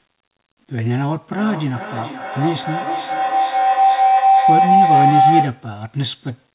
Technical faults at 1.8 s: feedback howl

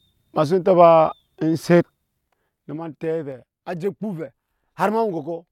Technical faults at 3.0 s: zipper noise

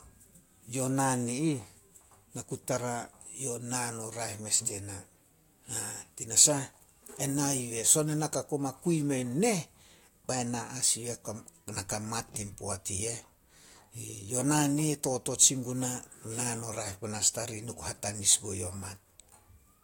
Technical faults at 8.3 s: none

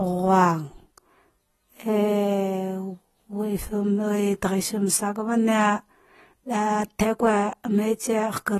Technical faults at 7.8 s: AAC compression

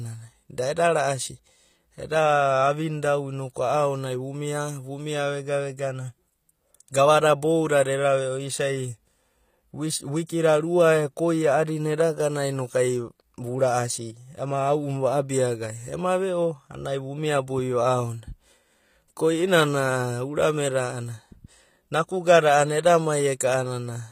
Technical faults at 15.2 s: HE-AAC compression

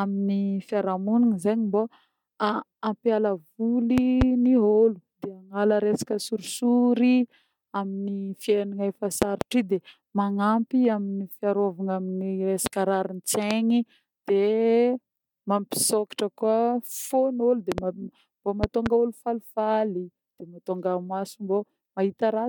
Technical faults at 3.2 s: none

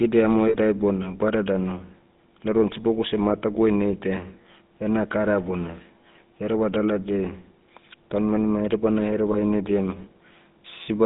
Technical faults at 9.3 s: GSM full-rate codec; lost GSM frames

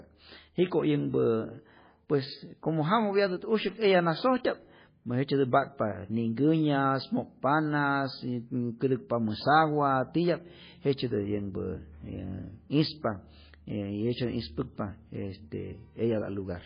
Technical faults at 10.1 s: MP3 compression

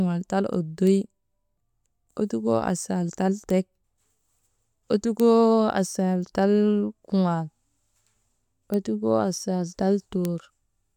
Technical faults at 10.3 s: bit error spike

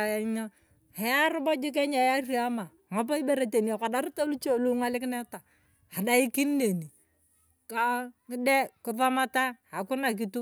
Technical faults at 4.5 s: none

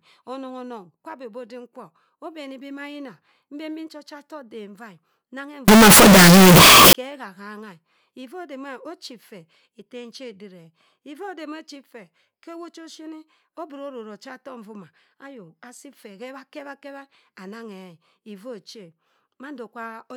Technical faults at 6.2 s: signed and unsigned mixed up

